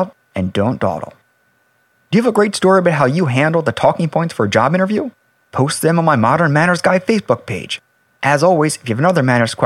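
No technical faults are audible.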